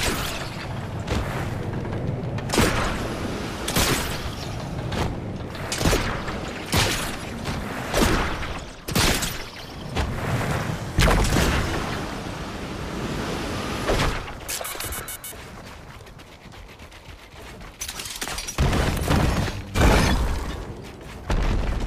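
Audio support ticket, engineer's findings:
No audible faults found; no findings to log for this ticket.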